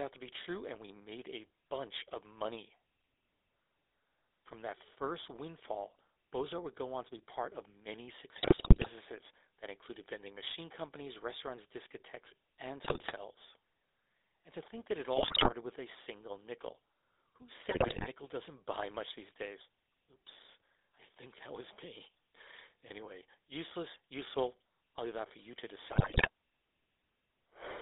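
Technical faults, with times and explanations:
Throughout: GSM full-rate codec. The speech is confined to a 300 Hz to 3.7 kHz band, with a plainly audible buzzy, gravelly roughness from the coarse pulse-driven excitation, which fits a 13 kbps stream. A spectrogram shows a hard ceiling near 3.7 kHz and grainy, smeared harmonics.
8.36–8.89 s (after "be part of many"), 12.84–13.13 s, 15.16–15.53 s (between "to think that it" and "with a single nickel"), 17.70–18.08 s and 25.88–26.29 s (after "that for you to"): GSM bit errors. Corrupted bits in the filter, pitch and gain values wreck frame after frame, so the speech breaks into squawks, pops and gargling. The waveform shows abrupt level jumps, and the spectrogram shows blotchy, disjointed bands.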